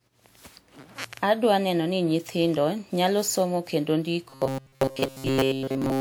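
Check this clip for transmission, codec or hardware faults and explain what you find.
Two faults are present in this speech clip.

Generation loss runs throughout: swirly, hollow smearing with blurred attacks, likely from about ten successive WMA passes at 128 kbit/s.

Robotic sound from repeated short buffers runs from 4.30 s to 6.00 s, after "nyithindo nyalo somo kendo". A rigid, metallic 134 Hz buzz replaces most of the audio, likely from a roughly 7.5 ms buffer replayed repeatedly. Unlike generation loss, it imposes a fixed pitch.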